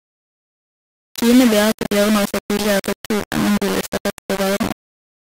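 From start to finish, the speech carries heavy grainy distortion. It is the sound of low bit depth without dither. The error sits only about 10 dB below the speech, so the grit is nearly as loud as the voice itself. It rises and falls with the speech instead of forming a steady hiss. Quiet stretches break into sputter or drop out. The coarse steps fit rounding to about 3 bits, likely with no dither added beforehand.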